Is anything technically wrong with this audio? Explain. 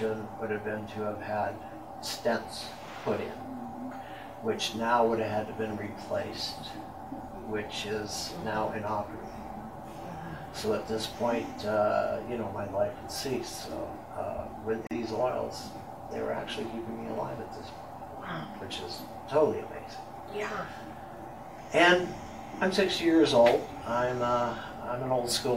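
Yes. At 14.87 to 14.91 s a 41 ms dropout with smeared edges breaks the sound: a gap at a join of encoded pieces, left by untrimmed encoder delay and padding.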